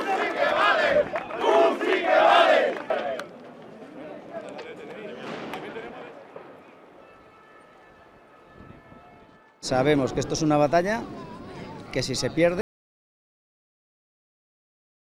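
An audio dropout to silence begins at 12.61 s and runs to the end of the clip. The sound stops abruptly mid-flow and gives way to silence, with no room tone or noise floor underneath, so nothing of what followed survives. The likely cause is that the input signal was lost, through a disconnected device, a broken link or an unintended mute, while the recorder kept writing silence.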